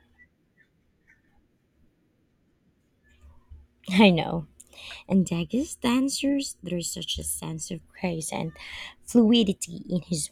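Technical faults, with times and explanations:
5.12–7.81 s, channel delay (comb filtering): the speech turns hollow and phasey up to just before "grace and". One channel lags the other by about 0.7 ms, so summing to mono cancels evenly spaced frequencies, starting near 700 Hz, leaving fixed notches.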